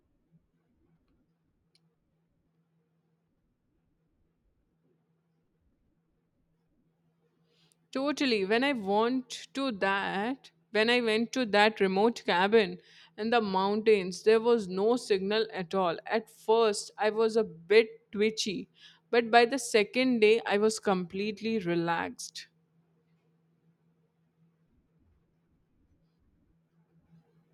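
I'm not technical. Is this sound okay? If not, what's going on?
Yes, it's fine: I couldn't hear any technical problems anywhere in the recording.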